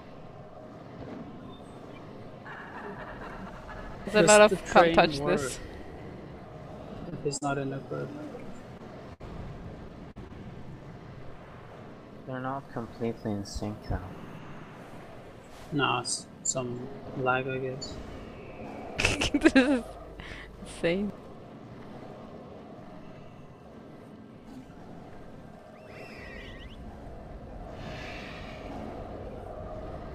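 Short concealed packet loss is audible as six brief smears or wobbles at 7.09 to 7.14 s, 7.38 to 7.43 s, 8.77 to 8.81 s, 9.88 to 9.91 s, 10.11 to 10.18 s and 10.28 to 10.31 s. In each case 20 to 40 ms of the stream failed to arrive in time, and the receiver filled the hole by extending the preceding sound for roughly 16 to 43 ms before blending back into real audio. On a spectrogram each patch shows as a short stretch of smoothed, repeated harmonics or flat noise where fine detail is missing. A burst of packet loss cuts in at 9.13 to 9.22 s: about 60 ms went missing in a row, and the receiver stretched the last sound over roughly 64 ms while turning it down. This gives a held buzz or fading hiss, after which the audio jumps ahead. The waveform shows a decaying, repetitive segment followed by an abrupt resumption.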